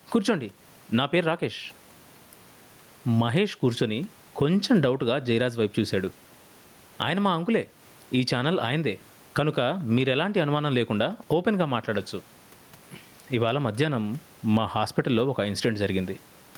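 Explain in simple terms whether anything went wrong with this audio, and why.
Gain pumping runs through the whole recording. Each time the speaker talks loudly, the level is pulled down, and the level swing is large. The likely cause is a microphone gain set far too high, with a fast limiter or compressor clamping down on every loud sound. That also squeezes loud and soft speech toward the same level, leaving it sounding flattened.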